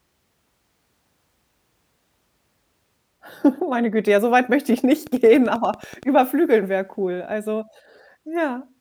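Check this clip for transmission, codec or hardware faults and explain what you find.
There's a train of clicks from 5.07 to 6.04 s, about ten evenly spaced pulses at 10.4 per second, peaking around the level of the speech itself. That regular ticking, audible right through pauses, likely comes from interference off nearby equipment or a faulty connection or power supply.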